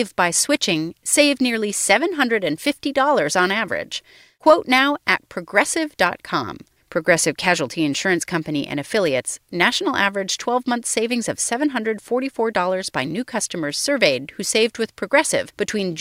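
Speech, with nothing technically wrong to report.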